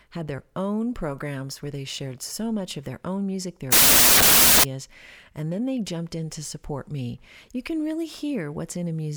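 From 3.72 to 4.64 s, right after "their own music their", loud noise buries speech running 1.5 times fast: a wrong sample width, with 16-bit samples read as packed 24-bit.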